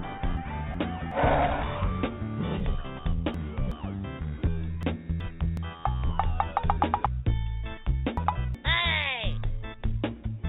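Chunks out of order at 0.37–1.12 s, 2.60–3.72 s, 4.83–5.57 s and 7.06–8.55 s: a 0.37 s block arrives one, two, one and three chunks late, jumbling the sound. Waveform and spectrogram show abrupt vertical seams, everything below 4 kHz through the G.711 A-law call path.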